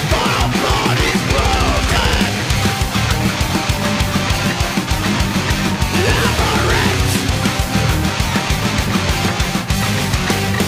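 Periodic clock jitter runs through the whole clip. The converter's sampling clock is being shaken at a steady rate of about 2 kHz. That timing wobble modulates everything in the audio. Each component gains a pair of sidebands, one about 2 kHz above and one about 2 kHz below. Higher components pick up stronger sidebands than lower ones. The result is a rough, metallic edge on the sound. It disappears whenever the audio goes silent.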